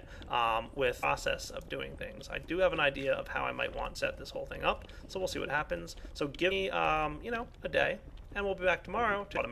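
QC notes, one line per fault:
1.02 s, 3.95–3.97 s, 6.50 s, 9.36–9.38 s: damaged data in a compressed stream. Four brief chirps or blips, each about 16 to 24 ms. Corrupted bytes make the decoder misread frames, lose sync and resynchronise at the next valid frame header.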